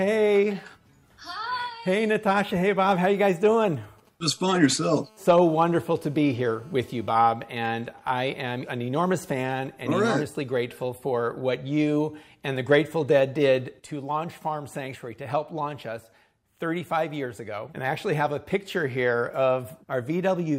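From 3.37 to 4.33 s, GSM signalling bursts break in. A 2G phone nearby sends short groups of radio pulses, and the audio circuit rectifies them. They come through as a galloping dit-dit-dit of brief 217 Hz buzzes, roughly 30 dB below the sound.

At 4.38 s the phone settles into a call, and a steady GSM phone buzz runs until 7.07 s. Its bursts repeat 217 times a second and are rectified into a hard, raspy 217 Hz buzz. It is rich in harmonics and about 32 dB below the sound.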